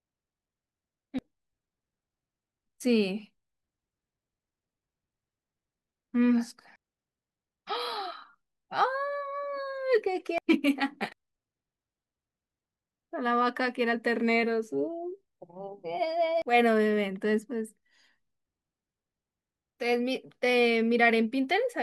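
Compressed frames are skipped at 1.19, 6.76, 10.38, 11.12 and 16.42 s. At each point the speech jumps forward by roughly half a second, or around 0.7 s at 6.76 and 10.38 s, which fits whole frames of about 93 ms being lost. Unlike a dropout, there is no silent gap.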